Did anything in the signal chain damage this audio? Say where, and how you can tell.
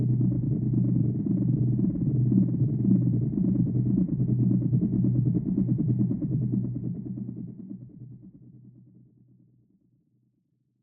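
No, nothing in the signal chain damaged this audio; the level simply eases down from around 6 s to 10.8 s as a deliberate fade-out.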